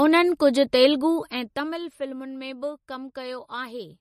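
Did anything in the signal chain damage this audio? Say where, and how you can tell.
Yes. The damage sits at the codec stage and runs through the whole speech clip: nothing is present above 14 kHz, and the remaining band has a plainly audible watery, swirling quality, with sibilants smeared and metallic. That is the signature of MP3 compression, likely at a low bitrate around 40 kbps, where the encoder cuts the treble at a fixed point and drops weak spectral lines that flicker frame to frame.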